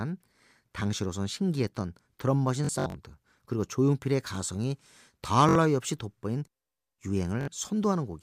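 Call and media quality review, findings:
Bluetooth stutter in the speech at 2.65–2.95 s, 5.49–5.55 s and 7.41–7.48 s. Lost or late packets; the receiver replays its last buffer, giving buzzy repeats, then skips ahead.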